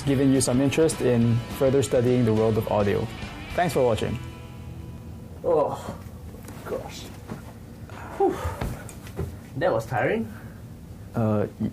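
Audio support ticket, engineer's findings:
No fault found on listening; nothing in the signal path needs action.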